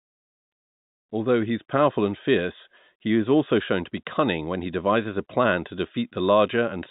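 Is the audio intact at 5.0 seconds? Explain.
Yes, the speech at 5.0 seconds is intact, carried through the G.711 telephone coding as expected with nothing above 4 kHz.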